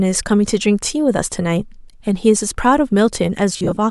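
Right near the end, from 3.53 to 3.77 s, the speech breaks up with lost LE Audio frames. About 130 ms goes missing in short gaps of up to roughly 40 ms each. The decoder patches them by replaying the last spectrum with scrambled signs, so the sound turns into brief noisy smears under the light, likely LC3, coding.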